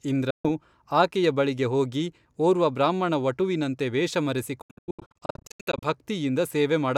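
At 0.30 s the speech cuts to silence for about 0.15 s. From 4.62 to 5.87 s it breaks into repeated short gaps, the longest near 90 ms, totalling about 0.78 s. Speech resumes each time as if it had played on, likely a Bluetooth dropout from late, discarded packets.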